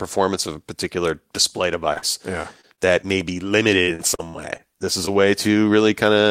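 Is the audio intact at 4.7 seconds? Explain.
No. After "may be", repeated packet loss runs from 3.83 to 5.12 s. Short holes, none longer than 50 ms, are patched by extending the preceding sound. The speech turns choppy and robotic.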